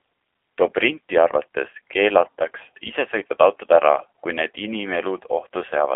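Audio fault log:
Throughout, G.729 codec (G.729A): the speech is carried at 8 kbit/s by a model that rebuilds each 10 ms frame from a vocal tract filter, a pitch predictor and a few pulses. Nothing above 3.7 kHz passes and lows under 250 Hz are thin, leaving the speech muffled, plainly rough and synthetic.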